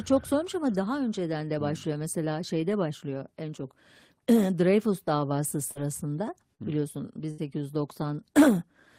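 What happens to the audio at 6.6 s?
Short concealed packet loss occurs from 6.55 to 6.62 s. About 40 ms of the speech failed to reach the decoder in time, and the receiver covered roughly 34 ms of that gap by extending the last sound it had, carrying the pitch forward where the speech was voiced or shaping noise where it was not, before blending back into the real signal. It comes across as a brief smear or wobble in the speech.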